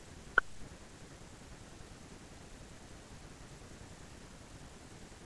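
No technical faults can be heard in this recording of speech. Nothing stands out at any moment that would call for comment.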